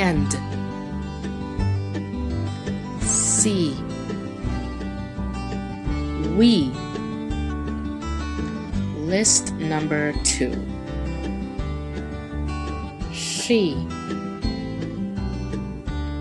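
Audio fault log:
No fault can be heard in this clip. Nothing in the audio points to a problem anywhere along the signal path.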